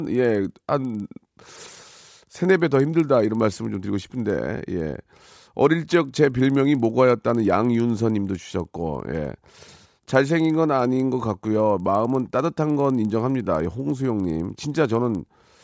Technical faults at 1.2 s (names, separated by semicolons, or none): resampler restarted on every block